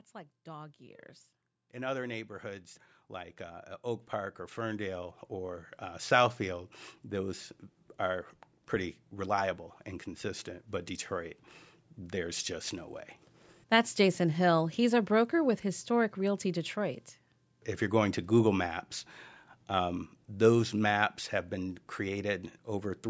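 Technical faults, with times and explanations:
0.44–6.12 s, automatic gain rising: the call's gain control judged the input too quiet and raised it by about 16 dB over several seconds, so the speech and its background swell together. On a waveform the envelope widens steadily; a spectrogram brightens evenly across all bands, noise floor included.
13.99–18.64 s, automatic gain falling: the gain control judged the input too loud, or its background noise too strong, and lowered it by about 4 dB, so the speech sinks gradually, carrying its background down with it. The waveform envelope tapers slightly, and the spectrogram dims uniformly, with nothing shown above 8 kHz by the normal call processing.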